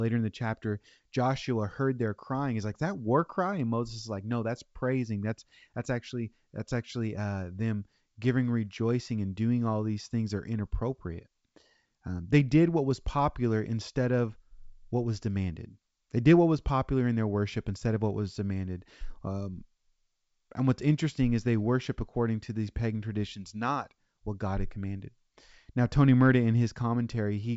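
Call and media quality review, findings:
No faults found in the speech. The G.722 wideband telephone coding path at 64 kbit/s keeps the speech clear up to about 7 kHz, with at most a faint hiss in the upper band.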